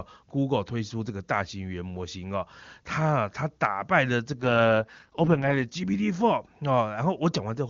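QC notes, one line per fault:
4.40–5.64 s, AMR rate drop: the HD Voice sound turns rough, raspy and synthetic for about 1.2 s, then clears. The rasp fits the link falling from the full 23.85 kbit/s AMR-WB rate to about 6.6 kbit/s, with the remaining bits going to error protection and the vocal-tract model left coarse. On a spectrogram the bandwidth holds but the harmonics blur into grainy smears; the waveform shows no gap or level step.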